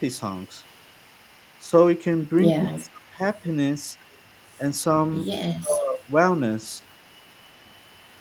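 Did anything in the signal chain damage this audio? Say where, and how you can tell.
Yes, in call processing: an echo leak runs 0.37–2.3 s and from 3.01 s to the end, a faint copy trailing 253 ms behind, likely a far-end loudspeaker echo the canceller missed.

Speech suppressed in double talk shows as dips at 1.68 s (slight), 2.67–3.21 s (deep, roughly 25 dB) and 5.58–6.08 s, likely the canceller ducking both talkers.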